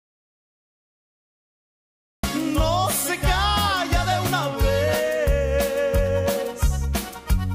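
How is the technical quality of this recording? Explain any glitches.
The recording opens with a gap: from the very start until 2.24 s there is an audio dropout to silence, already under way when the clip begins. The gap is silent, with no room tone at all, most likely because the input was lost while the recorder kept writing empty samples. On a waveform it is a dead-flat line; on a spectrogram, a completely blank block before the sound begins abruptly.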